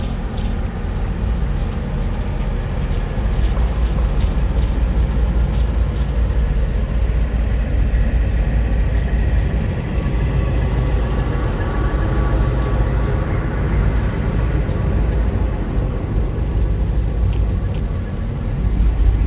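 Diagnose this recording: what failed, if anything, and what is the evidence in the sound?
A doubled audio track runs through the whole recording. Every sound is followed by a second, full-band copy about 0.4 s later, at roughly the same level as the original. The repeat has no decay and no room colour, so it is not an echo. The likely cause is a second capture path or an edit that mixed two copies out of step. Both copies share the call path's cut-off at 4 kHz.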